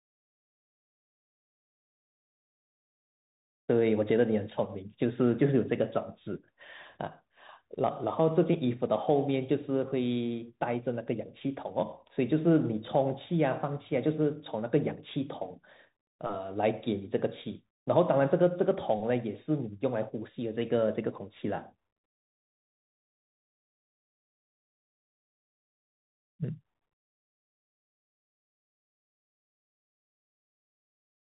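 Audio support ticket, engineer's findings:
Bluetooth CVSD headset codec on the whole speech clip. Hard ceiling around 3.8 kHz, nothing above. Esses scratchy, loud bright bits break up where the one-bit up/down steps can't keep pace. Grainy hiss under everything. Damage plainly audible start to finish, fits a 64 kbps CVSD link. Probably a headset stuck in hands-free mode; worth checking its profile.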